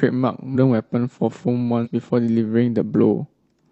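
At 0.51 s and 1.81 s, compressed frames are skipped. The speech jumps ahead about 150 ms, roughly three 46.4 ms frames.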